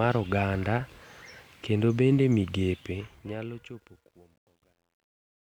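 From 2.73 s the speech's fade-out turns gritty and grainy, and from 3.67 s to the end at 5.54 s the quiet tail is at its worst and grittiest. This is truncation distortion on a fade. The level stage drops low bits without dither, which fits a 10-bit stage, so as the signal shrinks toward the smallest step it collapses into coarse square steps.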